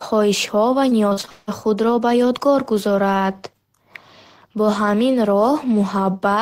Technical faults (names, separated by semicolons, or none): repeated packet loss (robotic sound)